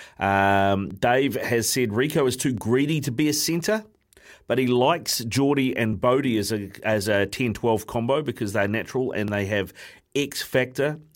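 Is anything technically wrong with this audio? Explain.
Yes. From 0.91 s to 10.96 s the speech carries a click or pop about every 1.68 s, around seven in all, evenly spaced regardless of what is being said. This steady rhythm is the mark of clock drift buffer slips, likely caused by two devices each running on its own clock. Their rates differ by roughly a tenth of a percent, so the buffer between them drifts until a block of roughly 70 samples is dropped or repeated, leaving a discontinuity at each slip.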